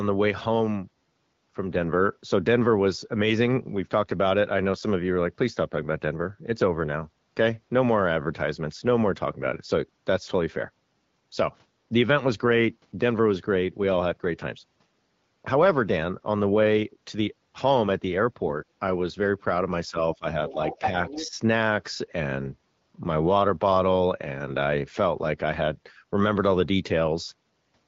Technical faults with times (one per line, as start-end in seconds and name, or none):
19.90-20.25 speech suppressed in double talk
20.48-21.30 other side's voice leaking through
20.79-21.37 speech suppressed in double talk